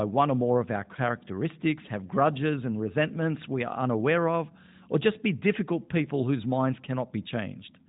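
The clip is speech, and nothing is technically wrong with it.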